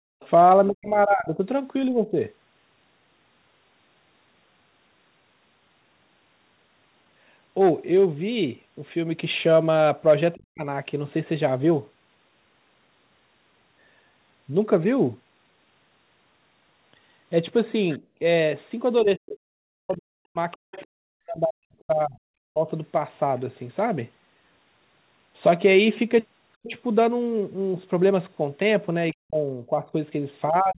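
Background gated by the echo canceller, 0.0 to 0.2 s: the room tone drops by about 34 dB and then returns. While the loudspeaker played, the canceller clamped the microphone.

Other side's voice leaking through, 0.2 to 0.3 s: a faint second voice, about 30 dB below the speech, comes through, likely residual loudspeaker echo the canceller failed to remove.

Speech suppressed in double talk, 0.69 to 2.15 s: the talker's level dips by roughly 20 dB across about a second, likely because the canceller treated overlapping far-end speech as echo and turned everything down.

Speech suppressed in double talk again, 10.34 to 10.67 s: the voice sinks by roughly 40 dB for about a third of a second.

Other side's voice leaking through, 17.92 to 21.81 s: the remote voice is audible around 25 dB under the talker. At the same time, from 17.99 to 22.68 s, speech is suppressed in double talk, dropping by roughly 40 dB in pieces totalling about 3 s. 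Within that stretch, from 18.0 to 18.19 s, the background is gated by the echo canceller, dipping about 14 dB.

Speech suppressed in double talk, 26.64 s to the end: the voice keeps cutting down by roughly 40 dB. The audio is band-limited to 4 kHz throughout, which fits the narrowband G.711 call path.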